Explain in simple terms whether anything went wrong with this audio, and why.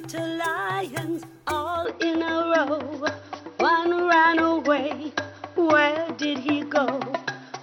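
From about 1.85 seconds to the end, the sound suddenly turns duller and boxier, with nothing above 6 kHz, a small change in loudness, and a faint new background noise. The change happens instantly, with no gap. This is most likely an input switched to a poorer device: partway through, the recording moved to a lesser microphone or headset, which carries a narrower range of sound and brings its own tone and noise.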